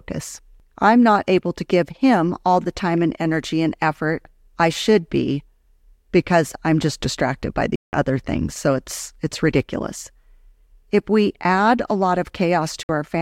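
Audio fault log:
7.76–7.93 s and 12.83–12.89 s, Bluetooth dropout: packets likely missed their delivery window to the headphones, so the speech drops to silence for 174 ms, then 58 ms, resuming further along.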